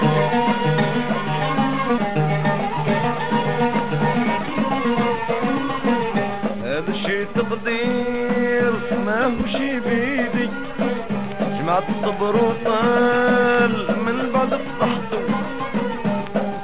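At 1.98 s there is a skip ahead: roughly a second and a half of audio was discarded, and playback joins the later material almost directly, with no filled gap. On a waveform it looks like an abrupt splice with no silent stretch. On a spectrogram, the patterns on either side change instantly at one vertical line.

From 2.08 s to 6.87 s comes a jitter buffer speed-up. The receiver trimmed short pitch-period slices many times over, shedding about 0.7 s of backlog and running at 113% speed. The audio sounds hurried but keeps its pitch. A spectrogram shows events squeezed closer together in time, while the harmonic spacing stays the same, all below the 4 kHz ceiling of the G.711 call path.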